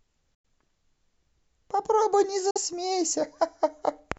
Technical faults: Bluetooth dropout

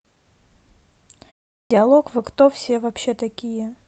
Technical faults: clock drift between sender and receiver; repeated timing corrections; clipped start after a pause

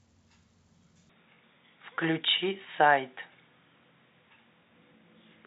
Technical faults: input switched to a poorer device

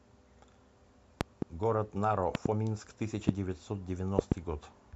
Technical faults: loud pop

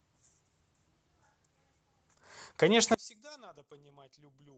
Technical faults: one channel inverted

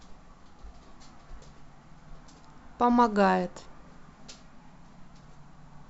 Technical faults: none

